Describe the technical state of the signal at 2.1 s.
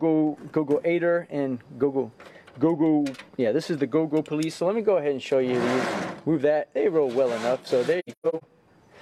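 At 2.1 s the signal is intact, with no dropout, distortion, glitch or other fault present at that point.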